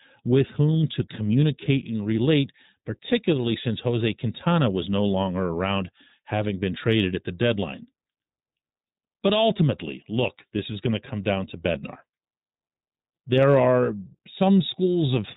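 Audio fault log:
throughout: iLBC codec. Speech is cut off at 4 kHz, giving a narrowband telephone quality, with a plainly audible rough, synthetic texture. Each 20 ms frame's excitation is coded independently of the previous frame, which fits iLBC's 15.2 kbps mode.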